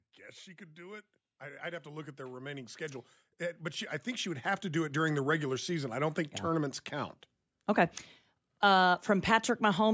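An automatic gain rising fault affects this speech recording: the gain control judged the input too quiet and kept raising its gain from 0.55 to 6.05 s, by about 17 dB, so voice and background noise swell together steadily through the call-processed, band-limited audio.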